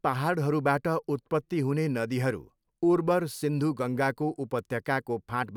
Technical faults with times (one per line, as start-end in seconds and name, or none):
none